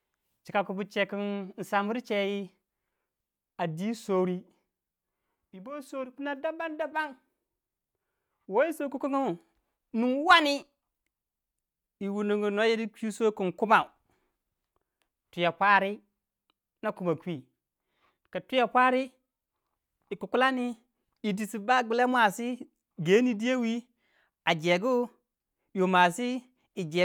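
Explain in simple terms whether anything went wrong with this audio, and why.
Nothing went wrong here: the speech recording comes across as it should, with no faults to point to anywhere along the way.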